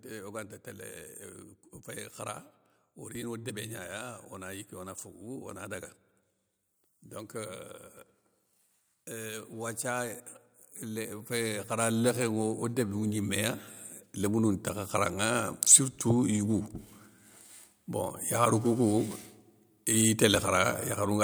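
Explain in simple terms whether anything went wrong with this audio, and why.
From 9.1 to 16.58 seconds, the voice and the background noise slowly swell louder together. That's automatic gain rising: the recording level control judged the input too quiet and turned it up.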